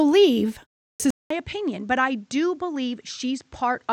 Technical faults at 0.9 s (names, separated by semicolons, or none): clipped start after a pause